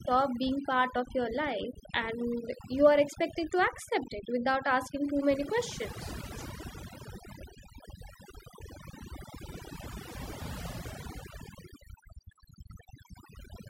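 From start to finish the gaps between phrases fall to near silence dotted with twinkling specks, while the softer edges of syllables seem to dissolve. This is overdone noise removal: a noise reduction stage set far too aggressively pushes individual frequency bands down or off whenever they sit close to its noise estimate, so quieter parts of the voice are cut away along with the noise.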